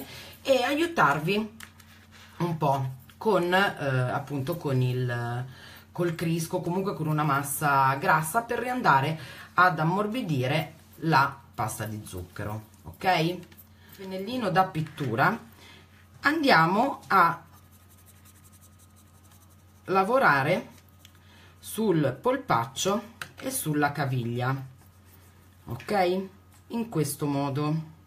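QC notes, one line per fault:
7.24 s and 16.83 s, dropped samples: At each point the stream has likely lost a tiny run of samples, about 0.4 ms, so the waveform leaps straight from one value to a later one with nothing in between. That instant step in level is far too brief to remove any audible sound, but it produces a single sharp click each time, seen as a thin vertical line running across the full spectrum.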